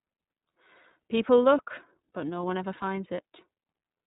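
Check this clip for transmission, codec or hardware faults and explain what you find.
There's one fault, and it runs the whole length of the speech: iLBC codec coding. Each 30 ms or so frame is coded independently, nothing above 3.8 kHz survives, and the plainly audible roughness and synthetic edge fit iLBC at around 13.33 kbps.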